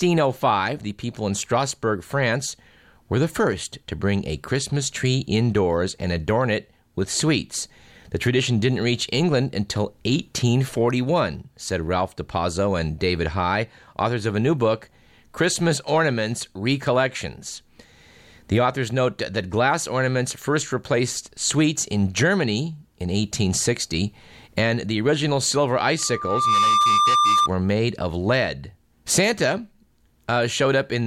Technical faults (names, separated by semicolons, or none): loudspeaker feedback squeal